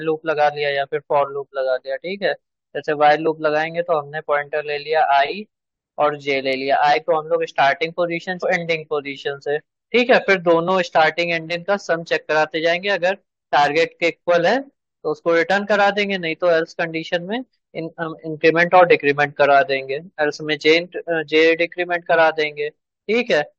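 A stream segment skipped at 8.42 s: the speech jumps abruptly forward with a brief blip, the likely cause being one chunk of the segmented stream failing to load so the player carried on from the next, leaving a stretch of the programme missing.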